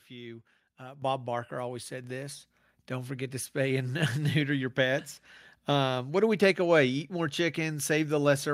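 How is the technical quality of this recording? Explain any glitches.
Two level jumps stand out. The microphone volume stepped up at 1.02 s, by about 10 dB, and again at 2.04 s, by about 3 dB, just before "this don't forget to". The call software raised the mic's input gain in single steps, so speech and background both get louder at once.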